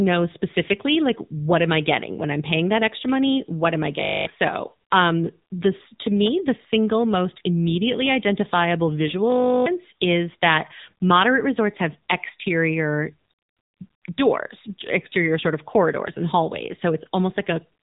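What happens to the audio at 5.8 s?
AMR narrowband mobile codec damage runs through 5.8 s and the whole clip. The speech is squeezed into a vocal-tract model with almost nothing above 3.8 kHz, sounding buzzy and synthetic, which points to a low bitrate near 8 kbps.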